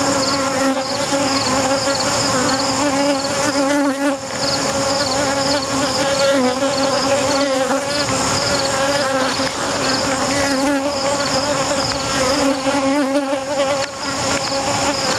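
All the way through there's gain pumping: the background swells in gaps and ducks around 15 dB under loud sounds, likely from gain set too high feeding a fast limiter.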